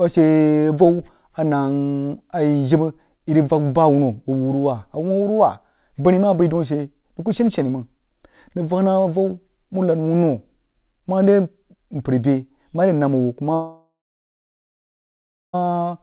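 From 13.54 s to 15.55 s the speech turns into a fading buzz, then about 1.6 s of near silence, with 2 s of audio lost, likely from a long network dropout. The waveform shows a decaying tail flattening out, and the spectrogram shows a smeared band thinning to blank.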